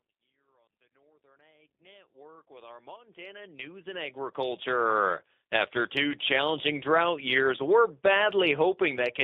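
From the start to the end, the speech sounds thin, slightly rough and synthetic, with a buzzy, processed edge. Nothing is heard below about 250 Hz or above about 3.7 kHz. This is G.729 codec damage, and it is plainly audible. The codec rebuilds the speech at 8 kbit/s from a vocal tract filter, a pitch predictor and a few pulses per frame, rather than keeping the waveform. The narrow band fits a telephone line, and it stays the same under the smooth fade-in that rises over the first 5.03 s.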